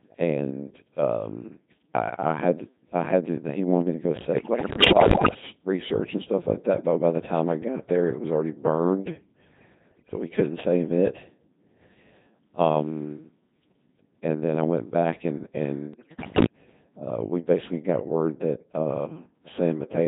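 Codec 2 vocoder coding runs through the whole speech clip, heavily degrading it. The decoder rebuilds the voice from sine waves driven only by pitch, voicing, energy and a spectral envelope, so the speech sounds robotic and buzzy, consistent with the 2.4 kbit/s mode. Bit errors on digital voice radio hit at 4.36 to 5.42 s (after "wanted me to go", before "research and stuff like"), 9.92 to 10.16 s (before "we couldn't save it") and 15.94 to 16.46 s (after "I went back and", before "uh we basically got"). At a bit error rate of roughly 15 percent, corrupted frame parameters make the voice jump in pitch, level and timbre, breaking into bleeps, warbles and gibberish.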